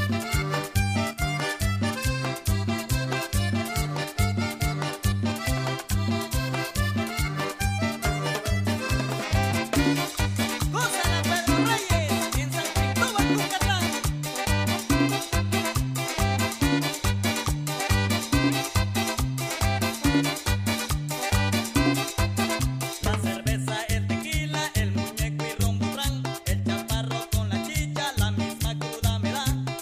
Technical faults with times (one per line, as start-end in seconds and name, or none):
1.13-1.22 one channel drops out